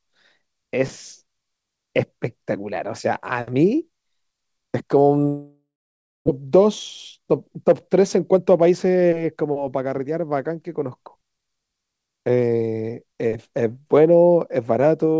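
A long network dropout, likely, runs from 5.28 to 6.29 s. About 0.6 s of speech never arrives. The receiver stretches the last sound into a fading buzz, then holds near-silence for about 0.59 s before the speech resumes with that part gone.

Jitter buffer speed-up follows at 6.37 to 6.67 s (112% speed) and 7.17 to 10.25 s (111% speed). Audio piled up after the outage is drained by cutting short pitch-period chunks, roughly 40 ms and then roughly 300 ms in total. The speech sounds hurried at unchanged pitch, with the call path's 8 kHz top end intact.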